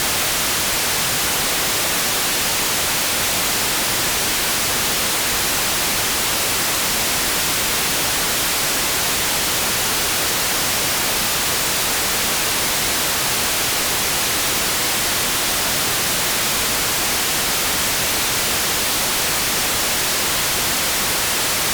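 Nothing stood out on listening to this audio.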